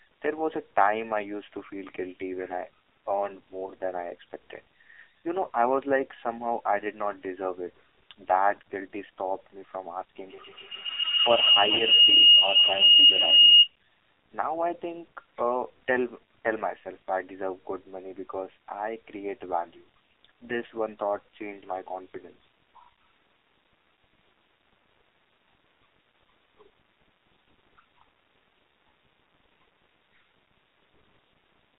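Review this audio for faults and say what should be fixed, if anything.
The whole clip of speech is band-limited and coloured by the AMR narrowband mobile codec. Nothing sits below about 300 Hz or above 3.7 kHz, and the voice is buzzy and synthetic, with heavy damage that fits a low AMR mode of around 5.9 kbps. The codec rebuilds speech from a vocal-tract model driven by a few pulses, so there are few bits for fine detail. On a spectrogram, everything is confined to a flat-edged band, with smeared, blocky harmonics. Prevention: carry the call over a wideband or higher-rate path instead of a narrowband mobile leg.

From 3.66 to 3.70 s there is a brief dip and warble from lost AMR speech frames. It sounds like a single 20 ms frame failed its checksum, so the decoder reused the previous pitch and vocal-tract settings at reduced gain rather than leaving a hole. On a waveform this shows as a short sag in amplitude. 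A spectrogram shows a momentary frozen, fading slice where the harmonics stop evolving. Prevention: improve radio coverage or use stronger error protection on the link.

From 10.23 to 13.77 s a feedback howl builds to about 10 dB above the speech. A second device in the same room is feeding loudspeaker sound back into a microphone on the call, and each trip round the loop adds gain. The repeats therefore narrow onto a tone around 3 kHz that pulses roughly every 150 ms, the loop's delay. A spectrogram shows a bright horizontal line swelling and throbbing. The waveform balloons into near-regular bursts. Prevention: mute or remove the extra device, or enable echo cancellation.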